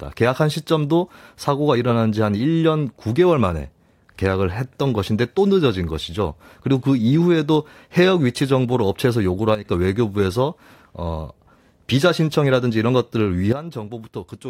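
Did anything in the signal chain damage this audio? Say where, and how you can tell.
Yes. There are sudden gain jumps from 9.55 to 9.65 s, about 9 dB down, and from 13.53 s to the end, about 12 dB down. Speech and background noise drop together instantly, which points to a digital gain change, likely applied in call processing without a ramp.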